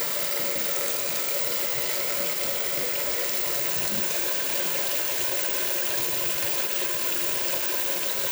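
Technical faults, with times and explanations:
Nothing technical stands out here; the audio just runs along with no faults to flag.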